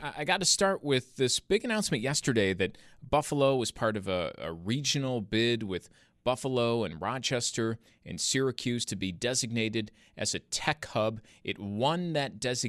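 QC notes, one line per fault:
8.83 s, compressed frames skipped: a brief smeared blip just before "to be designated as", with the speech jumping ahead rather than clicking. Roughly two whole frames of the encoded stream were never played, either missing from the file or rejected by the decoder as damaged, so around 50 ms of audio is lost. The jump size fits a frame length of about 26 ms, and the overlap between neighbouring frames softens the join into a smudge.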